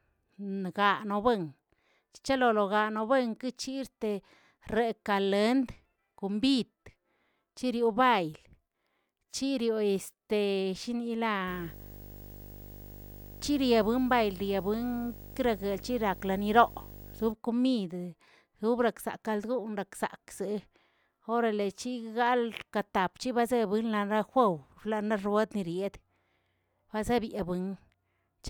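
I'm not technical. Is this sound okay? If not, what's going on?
No. From about 11.47 to 17.32 seconds, a steady low buzz sits under the speech, with a gritty hiss on top and a very high whine. It is quieter than the speech. This is video or display buzz: a screen or its cable is leaking electrical noise into the audio. The buzz repeats 50 times a second, matching how often the picture refreshes, and the thin whine near 15.6 kHz comes from the screen drawing its lines.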